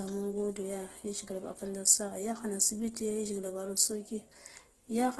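All the way through, the speech has a rough, grainy, noisy texture and nothing above 12.2 kHz. That's likely Opus compression running its music mode at a low bitrate, something like 12 kbps, filling starved bands with folded or noisy content.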